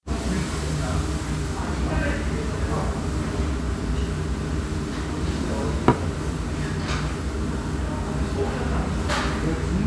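No technical faults can be heard anywhere in this recording of sounds.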